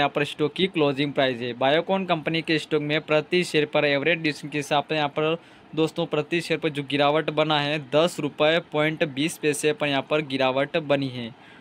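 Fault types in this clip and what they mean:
No fault types are present in this clip.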